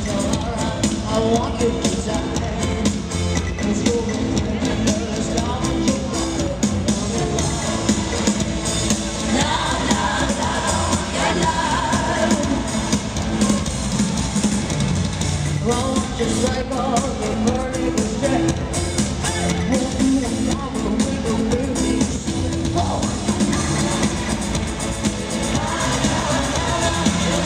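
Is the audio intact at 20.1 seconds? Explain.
Yes, the audio is intact at 20.1 seconds, with no dropout, click, distortion or other fault audible at that point.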